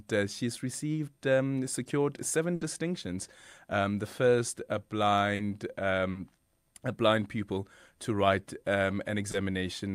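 At 2.55 s, right after "received um secured seven", a burst of packet loss runs to 2.63 s. The receiver stretches the last sound for about 60 ms, fading it as a held buzz or hiss, then resumes with roughly 60 ms skipped. The audible fade and the jump forward set it apart from the briefer fills later.

Short concealed packet loss follows at 5.35–5.41 s, just after "the first a", again at 6.11–6.17 s (each about 40 ms), and at 9.31–9.35 s (about 20 ms). Each is patched from the preceding sound and blended back, leaving only a quick smear or wobble rather than a fading hold.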